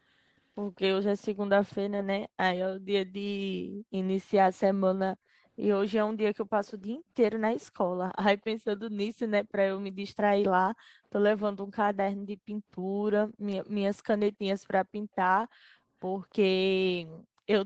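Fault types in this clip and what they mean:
Echo leak: there's a faint copy of the speech trailing about 296 ms behind the original, very low in level, from 6.67 to 8.79 s, plus a tiny blip at 16.3 s. That's likely a speakerphone whose echo canceller let some playback slip back.
Background gated by the echo canceller: the room tone ducks while the canceller clamps the mic during playback, then comes back. There's a brief dip of about 18 dB near 6.97 s, then deeper drops of about 40 dB around 10.8, 12.3 and 14.9 s.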